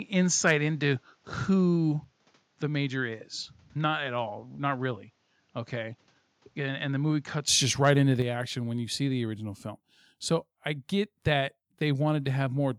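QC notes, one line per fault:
0.49 to 0.51 s, microphone overload: a brief harsh crackle rides on this loud peak, its waveform tops flattened by about 2 dB past the converter's limit across roughly one or two percent of samples, most likely from input gain set high enough to drive the converter into clipping.
8.22 s, microphone volume stepped down: between "just right into" and "action when you see", voice and background both drop abruptly by about 4 dB in one step, likely the call software cutting the device's input volume after detecting a level that was too hot.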